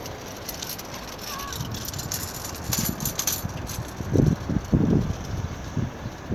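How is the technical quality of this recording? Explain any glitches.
The recording has no technical faults to report. Nothing in the audio calls for explanation as a glitch.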